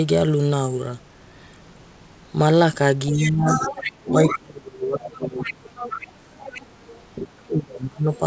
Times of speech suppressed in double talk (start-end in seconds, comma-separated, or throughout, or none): 3.11-5.69, 7.16-8.22